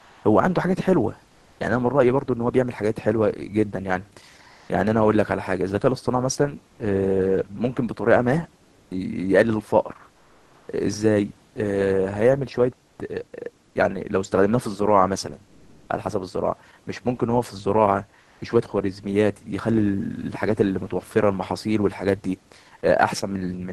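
Comfort noise in place of the background turns up in the pauses at 0.0–1.59, 4.51–4.67, 6.71–6.79, 8.63–11.55, 12.91–12.99, 15.47–15.87 and 18.23–18.39 s. The real room noise gives way to a flat, featureless hiss, shifting level by about 1 to 4 dB, likely from Opus discontinuous transmission.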